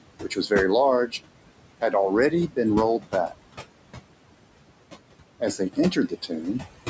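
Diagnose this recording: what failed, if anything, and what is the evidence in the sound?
The failure is in call processing, and it's the noise suppressor. You get steady noise suppressor artifacts throughout: the room noise, sitting about 11 dB under the speech, gets pulled down by about 21 dB in the gaps, then floods back under each phrase.

The same stage produces speech cut by the noise suppressor at 0.2–0.51 s, 2.3–2.58 s, 2.99–3.43 s and 5.4–6.44 s. Each time, a tenth to a fifth of a second of quiet speech gets mistaken for noise and ducked by about 13, 17, 21 and 15 dB, so those bits sound swallowed.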